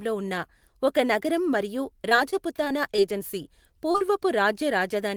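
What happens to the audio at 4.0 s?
Two short concealed packet losses fall around this moment, one from 3.92 to 3.96 s and another from 3.98 to 4.02 s, each covering about 20 ms of missing speech. In both gaps the receiver extrapolated the preceding sound, continuing its pitch or shaped noise, then crossfaded into the real signal. The result is a pair of quick smears or wobbles in close succession, where a brief consonant may be lost.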